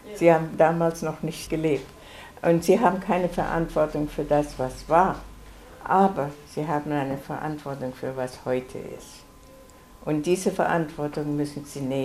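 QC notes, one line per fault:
No faults found on this clip; nothing to log.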